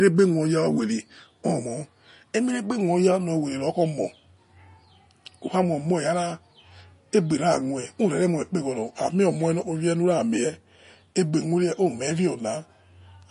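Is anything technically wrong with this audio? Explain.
Yes. MP3 compression throughout the clip is the likely cause of clearly audible damage to this speech. The encoder appears to have been short of bits, which fits a low bitrate of around 40 kbps. It has removed everything above 10.5 kHz, dulling the s sounds. Weak frequency components are dropped and then restored from frame to frame, giving the speech a watery, swirling texture and softened, smeared onsets.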